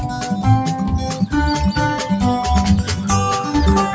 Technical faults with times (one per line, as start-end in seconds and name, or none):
0.00-3.94 noise suppressor applied to music or sounds
1.11-1.28 sound cut by the noise suppressor